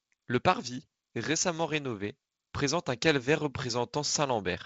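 No technical faults can be heard in this speech clip. It carries the sound of G.722 wideband telephone coding, with nothing above 7.9 kHz and a light grain in the lower band that fits its 48 kbit/s mode.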